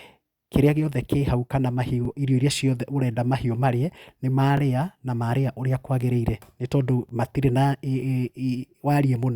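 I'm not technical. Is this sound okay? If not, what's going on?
No. The speech has a fault called overlapping chunks. The audio was handled in pieces about 2.5 seconds long, and each piece starts a little before the previous one ended. So a tiny slice, about 20 milliseconds, plays twice at each join. You hear it as a small click or stutter at 2.05, 4.57 and 7.09 seconds, evenly spaced every 2.5 seconds.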